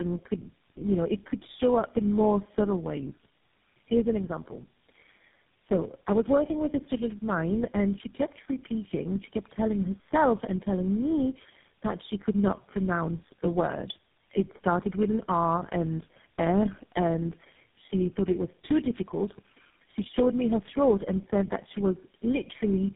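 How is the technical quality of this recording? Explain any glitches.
The technical quality is poor throughout, because of tandem speech coding. The call seems to have passed through about four successive low-rate mobile codecs, plausibly AMR and GSM full rate, each decoding and re-encoding the previous one's damaged output. Errors stack, leaving the speech rough, muffled and warbly, with nothing above 3.7 kHz.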